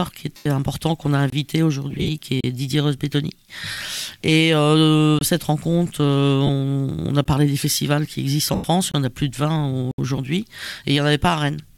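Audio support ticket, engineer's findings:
Lost LE Audio frames at 0.36–0.46, 1.90–2.10 (scattered, longest run about 50 ms), 3.71–3.77, 6.47–6.50, 8.53–8.64 and 10.16 s. LC3 concealment smears the sound noisily, fits 7.5 ms frames.

Block of digital silence at 1.30, 2.41, 5.19, 7.25, 8.92 and 9.91–9.98 s. Likely output buffer underrun; the 23 ms holes fit a 1024-sample buffer.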